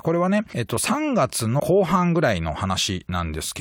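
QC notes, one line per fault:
0.49–0.53 s and 1.56–1.60 s, compressed frames skipped: the speech lurches forward, dropping roughly 0.3 s, then about 0.1 s. Whole frames, fitting a 43 ms frame length, went undecoded.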